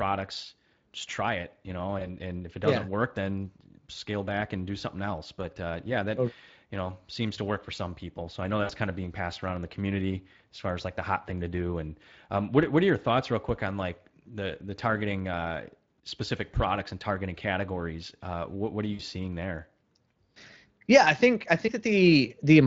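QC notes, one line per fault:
1.99–2.15 s, 8.63–8.71 s, 18.93–19.01 s: VoIP packet loss concealed by the speech codec. Audio went missing for about 20 ms after "try it you know", then about 60 ms after "I know" and after "what what are". The decoder stretched its last pitch and filter at falling gain, so each gap sounds like a brief fading buzz or coloured noise, with weakened sound lingering just after.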